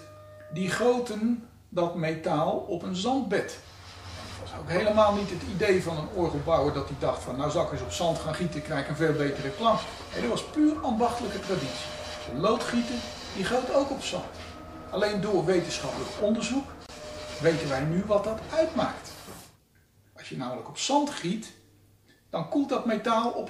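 At 16.86 to 16.89 s a gap at a join of encoded pieces cuts about 25 ms of silence into continuous sound. Separately encoded segments were butted together with their encoder delay and end padding left in. A waveform shows a flat dropout with abrupt, slightly smeared edges. The spectrogram shows a thin blank vertical stripe, and the sound then resumes where it stopped.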